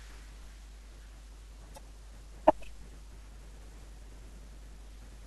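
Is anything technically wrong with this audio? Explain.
Yes, there are two problems. The first runs through the whole clip: mains hum, a steady low tone at 50 Hz sitting under the speech. It's loud, only around 10 dB below the speech itself. Power-line current is leaking into the signal path, most often through a ground loop or a transformer sitting too close to the cabling, so the 50 Hz drone and a few low harmonics ride along with everything else.

The second is brief, from 1.74 to 1.78 s: damaged data in a compressed stream. For about 44 ms the decoder hits corrupted bytes and can't make sense of the frames, so it loses its place and hunts for the next valid frame header. You hear that as a brief glitch at that moment.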